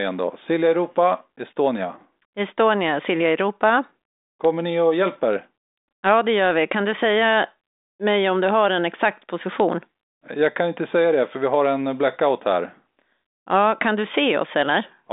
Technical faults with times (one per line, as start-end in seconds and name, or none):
none